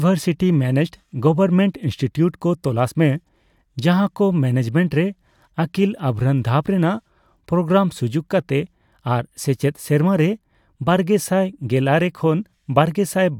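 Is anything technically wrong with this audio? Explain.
No, no technical faults heard.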